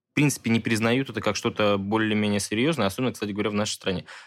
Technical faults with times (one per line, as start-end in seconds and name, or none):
none